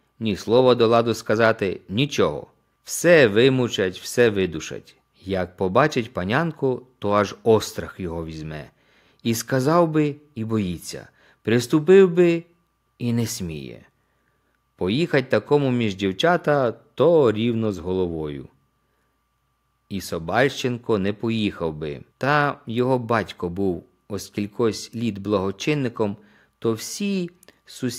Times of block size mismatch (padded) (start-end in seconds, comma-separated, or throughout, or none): none